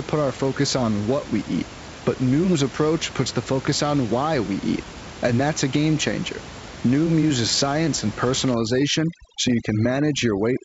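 From 8.54 s to the end, just after "uses science and", the background drops into twinkling near-silence: overdone noise removal, suppressing bands near the noise estimate.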